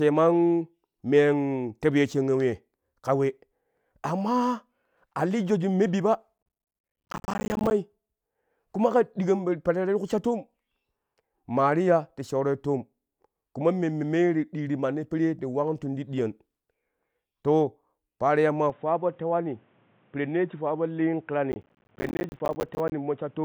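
Processor overload crackle runs from 6.38 to 7.71 s. The system repeatedly failed to deliver its small audio blocks on time, and each missed block came out as a tiny dropout of silence with hard edges. The gap lengths fit buffers of around 10 ms, and dozens are missed in close succession. The result is a dense, gritty crackle that tears through the speech for just over a second and then stops as the load eases.

At 18.70 s the sound abruptly turns duller and boxier, with no gap at the change. This is most likely the input switched to a poorer device. Nothing is heard above 3.8 kHz from here on, so sibilance and brightness vanish. The level drops by about 5 dB, and a new background noise floor sits roughly 35 dB under the speech. This narrower, quieter character continues through to the end.

Within that degraded stretch, processor overload crackle returns from 21.52 to 22.92 s. Once again, many roughly 10 ms buffers are missed back to back and replaced with silence, producing the same burst of sharp-edged crackling over the already band-limited sound.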